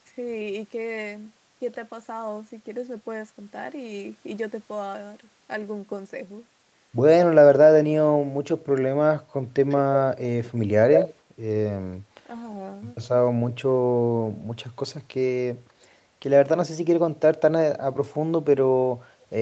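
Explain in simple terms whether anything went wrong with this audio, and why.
Echo leak at 9.69, 9.94, 10.43 and 10.93–11.14 s. The voice returns 0.15 s late, likely a speakerphone's echo canceller missing some sound.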